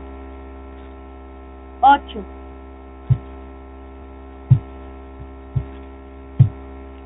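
From start to finish the speech carries Bluetooth CVSD headset codec damage, plainly audible and consistent with a 64 kbps CVSD link. Each sample is coded as a single up-or-down step, so nothing above 4 kHz survives, s sounds turn scratchy, and a granular hiss sits beneath the speech.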